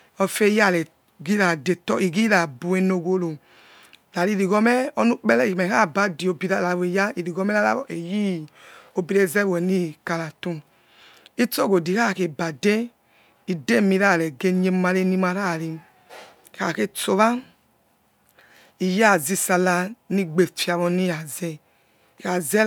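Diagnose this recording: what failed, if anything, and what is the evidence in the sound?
No fault found in any stage.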